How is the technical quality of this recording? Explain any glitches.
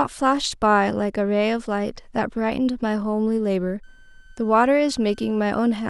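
The speech is marred by one fault near the end. From 3.83 s to the end, a switching supply whistle appears. A power supply's burst mode leaks a faint tone, well below the speech, wavering around 1.53 to 1.55 kHz.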